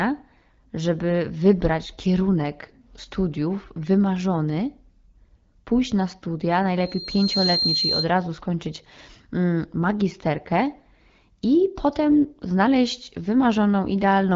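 Loudspeaker feedback squeal runs from 6.80 to 8.11 s, starting just after "pójść na studia" and clearing before "skończyć mm magisterkę". The microphone picked up its own loudspeaker, and at 4.2 kHz the loop gain went above one, so that frequency fed on itself. It swells from nothing over about 0.7 s into a piercing steady tone roughly as loud as the speech, then stops.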